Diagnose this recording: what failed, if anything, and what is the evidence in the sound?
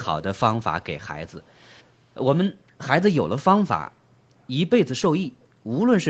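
Between 1.27 and 1.9 s a very faint, separate copy of the speech trails the original by 417 ms, sitting roughly 40 dB below it. This is likely an echo leak in the call processing: the far end played the call on a loudspeaker, its microphone picked that up, and its echo canceller let a residue return. A fixed, distinct lag rather than a smoothly decaying tail separates it from room reverberation, and it stays confined to that short stretch.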